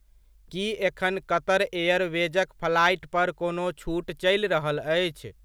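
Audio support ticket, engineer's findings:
No audible faults found on playback of this speech recording.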